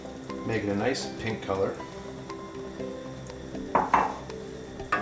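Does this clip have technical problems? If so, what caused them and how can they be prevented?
No, there are no technical problems in this clip.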